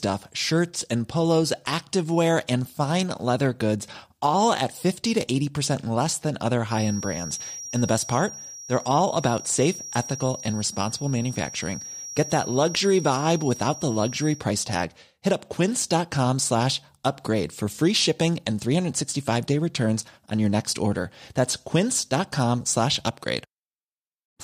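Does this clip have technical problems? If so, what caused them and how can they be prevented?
Yes, a feedback whistle runs from 6.65 to 14.46 s, starting just after "less than other": a thin, steady 5.7 kHz tone sits well below the speech, wavering slightly. It is likely caused by the loudspeaker-to-microphone loop hovering at the edge of feedback without running away. Lowering monitor gain, moving the microphone away from speakers, or notching 5.7 kHz would prevent it.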